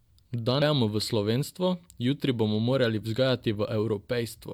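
Damaged data in the compressed stream shows up at 0.61 s as a brief glitch in the speech. The bytes for that stretch are corrupted, so the decoder misreads the frame, loses sync and has to find the next valid frame header before clean playback resumes.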